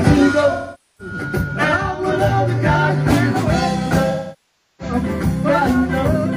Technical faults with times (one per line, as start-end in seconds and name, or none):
0.52-1.14 AAC frame loss with concealment
4.10-4.94 AAC frame loss with concealment